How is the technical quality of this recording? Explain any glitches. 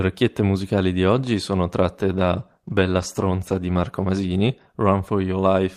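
Quality is degraded by one glitch. Just after "musicali di oggi sono", a call bitrate drop from 2.02 to 4.63 s halves encoding from 32 to 16 kbps, sounding rough and watery; the spectrogram looks coarser, blotchier.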